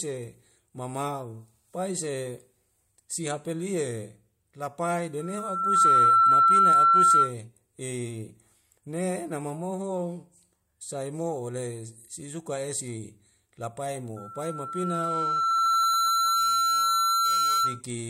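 Speech with loudspeaker feedback squeal, twice: a 1.4 kHz tone swells in under a second at 5.20 s and holds to 7.34 s, about 15 dB over the speech, then creeps up over a couple of seconds from 14.16 to 17.81 s. The mic is hearing its own speaker, and the loop gain tops one at that pitch.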